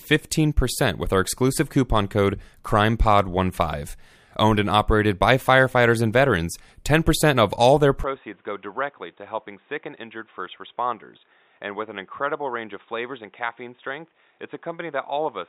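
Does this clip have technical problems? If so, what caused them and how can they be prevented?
Yes. Right after "of all their", at 8.04 s, the speech turns dull and boxy until the end, likely because the input switched to a poorer device. On a spectrogram, everything above 3.8 kHz disappears abruptly with no silent gap. The waveform drops by roughly 10 dB, and a new background noise sits around 35 dB below the speech. Locking recording to a single input device and disabling automatic device or headset-profile switching prevents this.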